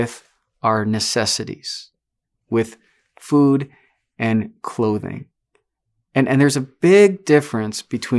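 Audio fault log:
No technical faults can be heard in this speech recording, and the signal holds steady and continuous throughout.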